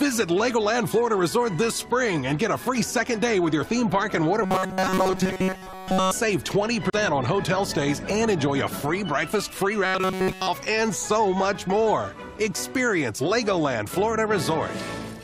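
Two stretches of robotic sound from repeated short buffers run from 4.43 to 6.11 s and from 9.86 to 10.48 s. In both, the audio collapses into a rigid metallic buzz at 188 Hz, which fits a loop of roughly 5.3 ms, likely because new audio arrived too seldom. About 70% of the first stretch and nearly all of the second is repeated material. On a spectrogram these stretches show evenly spaced horizontal harmonics of 188 Hz. The waveform shows an identical short cycle tiling most of those spans. A CD skip falls between 6.90 and 6.93 s. The sound drops out for roughly 30 ms and then resumes from a different point. On the waveform this is a brief flat gap with a sharp edge. On the spectrogram it is a thin vertical blank followed by an abrupt change in content.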